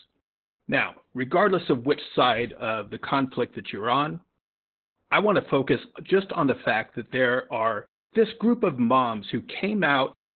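Opus voice compression runs throughout this speech clip: the audio points to the SILK coder at roughly 8 kbps in narrowband mode, so nothing survives above about 4.3 kHz, and the coarsely coded excitation leaves the speech muffled, hoarse and slightly robotic from start to finish.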